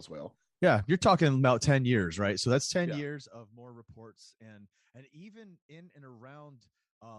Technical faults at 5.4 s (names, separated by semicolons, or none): none